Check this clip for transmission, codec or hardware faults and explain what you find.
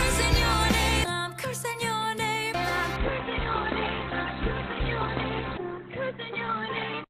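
One fault appears: an adaptive stream at a lower bitrate, from 2.96 s to the end. When the connection slowed, the player switched to a much cheaper encoding of the same stream, and the sound fits a drop from around 64 kbit/s Opus to roughly 12 kbit/s. With so few bits, the encoder discards everything above about 4.2 kHz, so the top end suddenly goes dull and muffled, with grainy codec artefacts, and no gap marks the switch.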